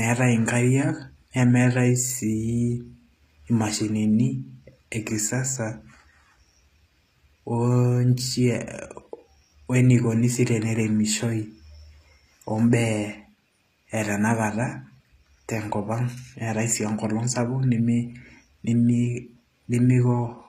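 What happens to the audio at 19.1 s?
At 19.1 s, as throughout, HE-AAC compression is plainly audible: treble, likely rebuilt from copied lower bands, sounds gritty and lispy, with nothing above 14.9 kHz.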